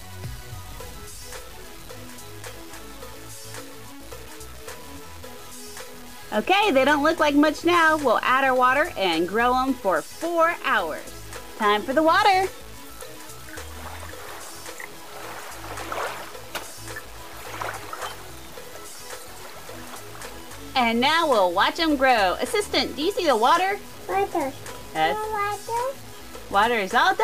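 Grainy, gritty distortion runs through the whole sound, clinging to it and changing as the sound changes, with quiet passages turning rough and the faintest parts sputtering or dropping out. The likely cause is low bit depth without dither: roughly 6-bit truncation, leaving error only about 25 dB below the signal.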